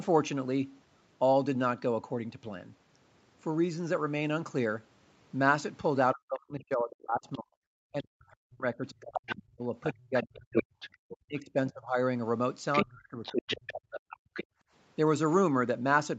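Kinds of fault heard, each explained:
Speech suppressed in double talk: The main talker's voice sinks and breaks up while a second voice is also present. This is likely an echo canceller that could not tell the two apart and turned both down. From 6.13 to 11.98 s the voice is cut in pieces for roughly four seconds in total, dropping by about 40 dB at worst. A shorter spell from 12.84 to 13.87 s loses about 35 dB.
Other side's voice leaking through: A second voice can be heard under the main talker, likely the far end played on a loudspeaker and not fully cancelled. A faint scrap sits about 25 dB down from 6.91 to 7.35 s. Longer stretches from 8.9 to 11.39 s and from 12.73 to 14.45 s are only about 5 dB below the main voice.
Background gated by the echo canceller: The room sound behind the talker drops out briefly while the loudspeaker is active. The echo canceller clamps the microphone hard, then releases it. 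This happens between 14.17 and 14.72 s, for about 0.4 s in all. The background falls by about 33 dB before returning.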